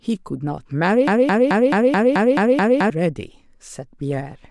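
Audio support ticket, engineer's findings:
Player, encoder or stream likely stalled, re-sending its last buffered fragment. Broken-record loop, 1.07 to 2.90 s: one 216 ms slice of speech repeats 8 times, back to back and identical, giving a stuttering, machine-gun effect. The speech that should have played across those 1.8 s is missing; playback resumes afterwards with that stretch skipped.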